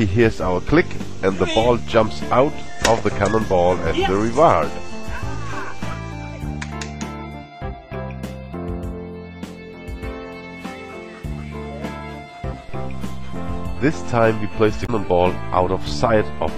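A short burst of damaged data in a compressed stream disrupts the audio from 14.83 to 14.90 s, lasting about 70 ms. Over that span the decoder is fed corrupted bytes, misreads or rejects the affected frames, loses sync and hunts for the next valid frame header. Unlike an ordinary dropout or network packet loss, the disturbance comes from the decoder stumbling over bad bitstream data rather than from a clean gap in delivery.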